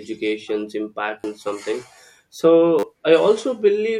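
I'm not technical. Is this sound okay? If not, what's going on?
No. Two repeated buffer faults occur, at 1.20–1.24 s, just before "and something", and at 2.79–2.83 s. New audio arrived late, so the player repeated one tiny slice, consistent with a 10 ms buffer, four extra times. This produces a brief buzzy stutter and loses about 40 ms of speech.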